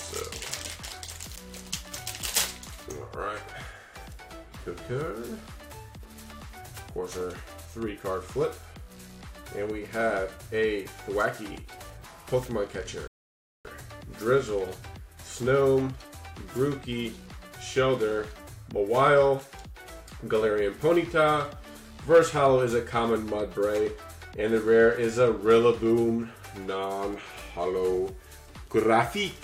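At 13.08 s the audio drops abruptly to silence and stays there until 13.65 s, a gap of about 0.57 s. This is a rebuffering stall: playback consumed everything that had been downloaded and halted until more data arrived. When the sound returns it picks up at exactly the point where it stopped, with nothing skipped or repeated. No content is lost, but the clip runs that much longer than the source.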